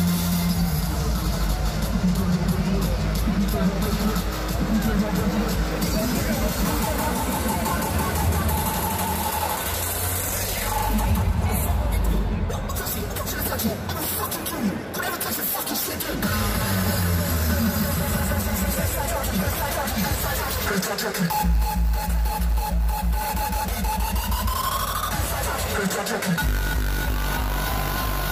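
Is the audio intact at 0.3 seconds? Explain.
Yes, at 0.3 seconds the audio is intact, with no dropout, click, distortion or other fault at that point.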